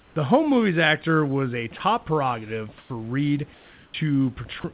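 Comfort noise in place of the background appears in this speech clip at 0 to 0.16 s, 2.78 to 2.9 s and 3.54 to 3.94 s. In each case the real room background, which sits about 30 dB below the loud speech, gives way to a flat, featureless hiss. That noise is about 2 dB quieter in the first gap, about 2 dB louder in the second and about 5 dB quieter in the third. This is likely discontinuous transmission, where the sender stops sending during pauses and the receiver synthesises noise roughly matched to the background. Sound dropped by the voice detector occurs at 1.78 to 1.8 s, right after "movies actor was a", and again at 4.6 to 4.64 s. Each time about 20 ms of real sound vanishes into steady noise before the speech resumes. The likely cause is the detector briefly classing sound as background and halting transmission. An onset clipped by the voice detector falls at 3.9 to 3.94 s, at the end of the longest comfort-noise stretch. 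The speech re-enters abruptly, with roughly 40 ms of its soft start missing. This likely happened because the detector was slow to register that sound had returned, so those first moments were never sent. The narrow G.711 mu-law telephone band, with nothing above 4 kHz, and the room noise about 34 dB under the speech are also present.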